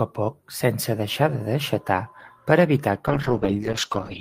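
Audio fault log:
3.08–4.20 s, call bitrate drop: the encoder is starved of bits, which fits a fall from 32 to 8 kbps, so the speech turns coarse and watery. On a spectrogram, content above 8 kHz abruptly vanishes, leaving a flat ceiling until the end.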